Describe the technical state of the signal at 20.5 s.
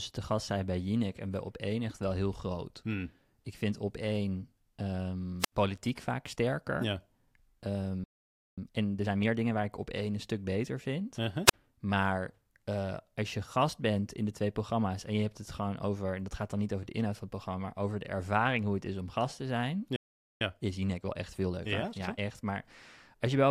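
At 20.5 s the speech is in a time-compressed catch-up running from 20.41 to 22.19 s. Having fallen behind, the player trims its backlog by removing small slices and cross-fading the joins, so delivery runs at about 1.25 times normal speed while pitch stays unchanged.

It follows a playback stall from 19.96 to 20.41 s, just after "om gast te zijn": the output drops to silence for about 0.45 s before resuming. The likely cause is the player running dry of buffered data or having its output thread blocked.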